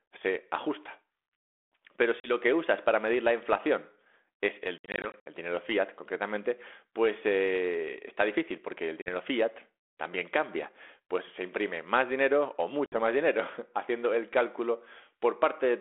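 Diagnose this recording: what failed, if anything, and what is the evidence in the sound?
Packet loss on an ADPCM call at the network stage blanked audio and desynchronised the decoder's predictor and step size. Hard-edged gaps at 2.2–2.31 s (before "que usas para medir"), 4.78–5.26 s (scattered, after "la inflación es el"), 9.02–9.09 s and 12.86–12.99 s return with slightly distorted speech.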